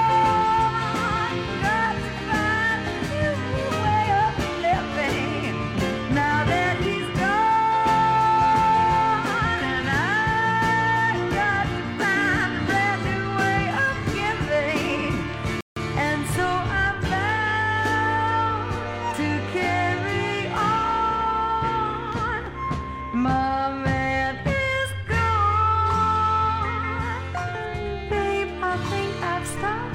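At 15.61 s there's a rebuffering stall: the player ran dry of downloaded audio and waited for more. You get a gap of silence until 15.77 s, about 157 ms, then the sound picks up exactly where it left off, so nothing's missing, just delayed.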